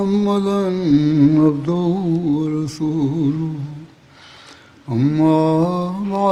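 Throughout the clip, clock drift between sender and receiver is at work: the sender's sample clock runs fast, by roughly four percent, so audio arrives quicker than the receiver plays it out. Its jitter buffer keeps filling beyond its target, and the receiver has to shed material continually to keep latency from growing. The result is a sound that never quite sits steady in time, with small, irregular hitches rather than one clean break.

From 0.24 s to 6.18 s, the receiver makes repeated timing corrections to cope with that surplus, cutting short pieces out of the stream so that playback runs at about 104 percent of the original pace. The edits all remove material, never repeat it, yet they fall at uneven spacing. Each cut is tiny, so it comes across as a faint skip or a slightly hurried, unsteady tempo rather than an obvious dropout.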